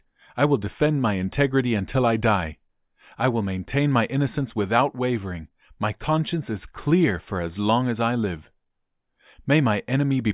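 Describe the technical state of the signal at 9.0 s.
At 9.0 s the speech signal is intact, with no technical fault present at that moment.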